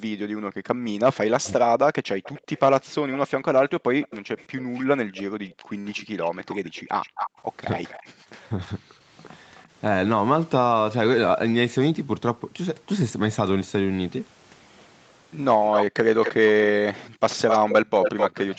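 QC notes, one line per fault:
0.00–0.85, 5.27–5.77, 8.12–8.21 and 17.08–17.21 s: background gated by the echo canceller. The room tone drops by up to about 40 dB and returns.
1.44–9.63 s: echo leak. A faint copy of the speech follows 262 ms behind at roughly 20 dB down, likely left by an incomplete far-end echo canceller. The fixed delay and separate repeat distinguish it from room reverb.
8.49–8.93 s: speech suppressed in double talk. The talker's own voice briefly dips by roughly 10 dB, likely because the canceller ducked it while the other side spoke. Unlike gating, the voice is what drops.
15.65–18.58 s: echo leak. The same 262 ms delayed copy returns, now only about 5 dB below the speech.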